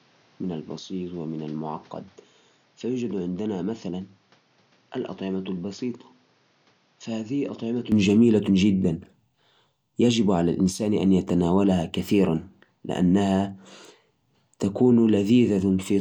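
Input switched to a poorer device, 0.0 to 7.92 s: the speech sounds dull and about 10 dB quieter, with nothing above 6.9 kHz and faint background noise well below it, likely from a narrower-band microphone. At 7.92 s it clears with no gap.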